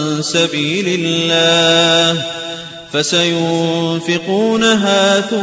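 Nothing goes wrong anywhere in the clip, so there's honestly nothing here that needs flagging.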